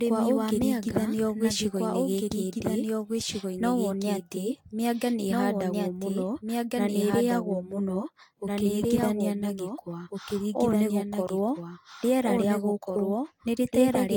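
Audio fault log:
throughout, doubled audio track: A second, slower capture path or an edit likely mixed the speech in twice, so a full-band copy about as loud as the original trails it by roughly one and a half seconds, dry and without room colour.
throughout, generation loss: The speech sounds as if it passed through a Vorbis codec around 70 kbit/s about four times. Each pass requantised on a shifted frame grid, piling up swirly, hollow smearing and blurred attacks, with nothing above 19.4 kHz.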